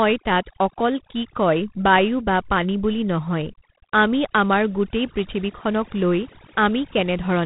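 Right from the start and all the way through, the speech has been hit by overdone noise removal. The reduction was pushed so hard that any frequency band sitting near its noise estimate gets pulled down or switched off, and the quieter parts of the speech are taken along with it. You hear it as a background that has dropped away and broken up into little twinkling specks.

Layered on top, for the whole clip, is G.726 ADPCM coding. Each sample is sent as a small difference from a running prediction, and with so few bits per sample the coding error is plainly audible: a harsh, rasping hiss that rises and falls with the speech level, which fits the 24 kbit/s mode. Nothing gets through above about 3.9 kHz, so the top end is cut off cleanly and everything sounds boxed into a phone-line band.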